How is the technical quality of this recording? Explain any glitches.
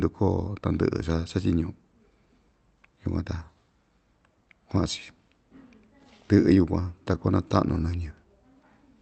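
No glitches can be heard in this recording; the speech arrives intact through a call link with the Opus codec at 32 kbps, which limits the audio bandwidth to 8 kHz.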